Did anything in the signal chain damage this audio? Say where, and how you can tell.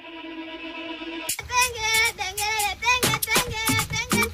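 No, nothing in the signal chain damaged this audio.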